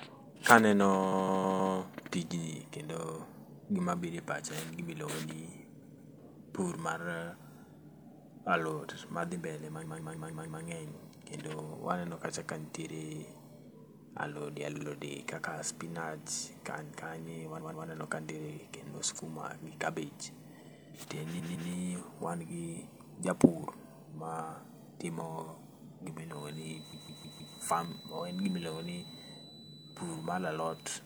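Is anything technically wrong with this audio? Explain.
Yes, there are repeated frames: short chunks of the speech replay back to back at 1.11–1.74 s, 5.82–6.13 s (between "gima ilongoni" and "pur mar"), 7.93–8.04 s (just before "alot madhi mbele"), 9.84–10.62 s, 14.75–14.85 s, 17.60–17.86 s, 21.38–21.70 s (right before "ni wan gi japur") and 26.92–27.55 s. Each time, a block of compressed frames, 52 to 157 ms long, got decoded again two to five extra times. You hear it as a stutter, and the repeats stretch the clip by up to about 0.8 s per spot.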